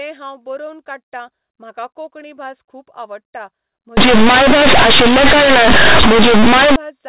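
From 3.97 s to 6.76 s, the speech turns into harsh, buzzy noise. This is companded audio read as linear. The stream is G.711 mu-law telephone coding, where each byte sits on a logarithmic scale. For this stretch, those bytes are played as plain 8-bit samples and never expanded. Every sign change throws the output across about half its range. Soft passages come out as loud as peaks. Pauses fill with heavy noise. Before 3.97 s, the telephone band limit near 4 kHz can be heard.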